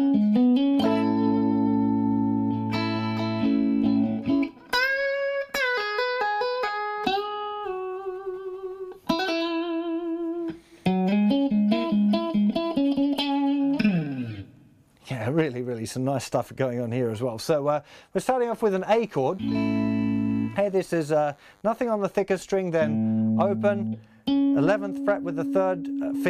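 From 18.54 to 21.62 s a DECT cordless phone buzz sits under the sound, roughly 35 dB down. A nearby handset or base station transmits a brief radio burst every 10 ms, and the audio circuitry rectifies each one, giving a thin, rasping buzz repeating at 100 Hz with a dense stack of harmonics. Mains hum can also sit at 100 Hz, but it is smoother and closer to a pure tone, and it runs steadily rather than appearing for three seconds and then stopping.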